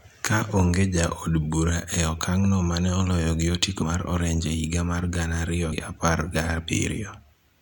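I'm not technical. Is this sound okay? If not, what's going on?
No, there are two small glitches. Right after "mane oloyo gi otiko", at 3.81 s, and again after "higa mar gana ariyo", at 5.71 s, the speech jumps forward with a quick smeared blip. These are compressed frames skipped: the file stores audio in chunks of 23.2 ms, and a few chunks (about three the first time, about four the second) never got played, so roughly 70 ms of speech goes missing the first time and about a tenth of a second the second time.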